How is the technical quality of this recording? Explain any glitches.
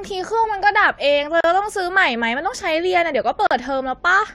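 The speech has two short dropouts. Both are gaps at a join of encoded pieces, at 1.41 to 1.44 s (36 ms) and 3.47 to 3.51 s (41 ms). Separately encoded segments were joined without trimming encoder delay and end padding, so brief silences with smeared edges interrupt the speech before it resumes exactly where it stopped.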